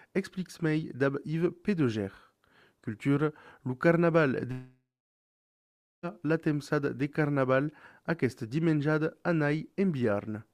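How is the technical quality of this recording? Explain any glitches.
The recording has one glitch, a gap in the middle.

Long network dropout, 4.51 to 6.06 s: the last sound smears into a fading buzz, then about 1.2 s of near-silence follows before audio resumes, skipping roughly 1.5 s of material. The likely cause is a stalled stream, with the receiver stretching what it last had until it ran out.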